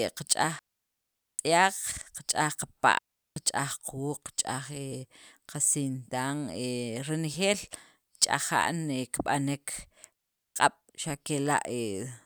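Digital wireless dropouts at 0.59 to 1.39 s, 2.99 to 3.36 s and 10.13 to 10.56 s, lasting about 0.8, 0.38 and 0.43 s: the radio link lost too much data, so the receiver muted with a very quick fade, leaving clean near-silent gaps in the speech with no noise burst on either side.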